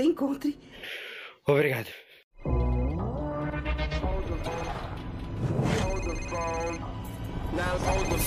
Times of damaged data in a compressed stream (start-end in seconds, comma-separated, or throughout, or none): 4.43-4.47